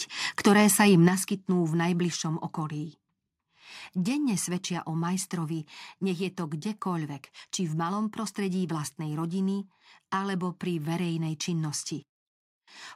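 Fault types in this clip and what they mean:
microphone volume stepped down: the speech level drops abruptly by about 7 dB near 1.08 s, then about 2 dB more near 2.1 s, likely from automatic input gain reduction.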